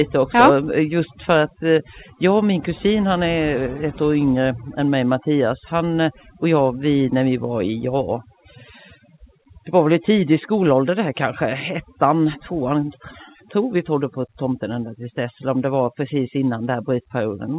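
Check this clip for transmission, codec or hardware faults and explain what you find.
One fault runs through the whole recording: overdone noise removal. The call path itself can be heard as a hard band limit with nothing above 4 kHz, which fits a narrowband G.711 A-law link.

The overdone noise removal is present from start to finish. The noise reducer was set so aggressively that any frequency band sitting close to its noise estimate gets pushed almost to nothing, and the softer parts of the speech are removed along with the noise. Between phrases the background drops to near silence sprinkled with twinkling artefacts. On a spectrogram the gaps show as dark, empty areas dotted with isolated bright specks, and the speech harmonics look ragged, with holes where weaker bands were removed. In the waveform the pauses sit almost flat at zero.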